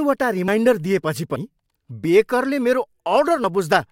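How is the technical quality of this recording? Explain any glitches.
The recording has three abrupt skips. At 0.48 s, 1.36 s and 3.44 s the speech jumps forward, losing about 40, 70 and 40 ms. This is likely a dropped buffer (overrun), where samples were overwritten before being read and the audio on either side was joined. Unlike a dropout, there is no silent gap, only a splice.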